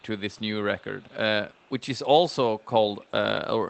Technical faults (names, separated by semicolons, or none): echo leak